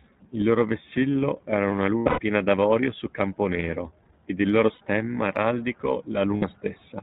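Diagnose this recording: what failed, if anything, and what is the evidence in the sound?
At the codec stage, the speech was carried by the iLBC codec, which cuts everything above 4 kHz and leaves the speech plainly rough and synthetic throughout. The texture fits its 15.2 kbps mode with 20 ms frames, each coded independently of the last.

At the network stage, packets went missing, producing lost iLBC frames at 1.86–2.20 s (200 ms lost across 320 ms, longest run about a tenth of a second), 4.74–4.82 s and 6.36–6.44 s (60 ms each). The decoder repeats the last pitch cycle with noise, heard as a held, buzzy vowel, then recovers immediately.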